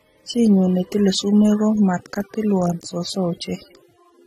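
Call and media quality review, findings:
Transcoding between lossy codecs, throughout the speech. Two kinds of coding artefact stacked, heard together. Nothing above 15.6 kHz. Likely cause: AAC-LC then Vorbis re-encode, the second coder spending bits re-coding the first's damage.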